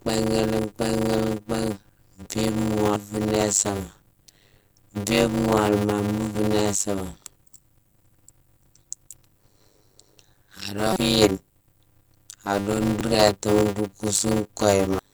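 Throughout, a block size mismatch (padded) leaves zero-filled gaps at 100 Hz. This fits 256-sample blocks being read as 480, so the speech runs at 0.533 speed with a buzz, showing as regular notches in the waveform.

Damaged data in a compressed stream causes brief glitches as the decoder loses sync. They fall at 2.96, 6.35, 10.93 to 10.97, and 13.01 s, just before "rétamo nro kousou kouye", and at 14.99 s, just after those words.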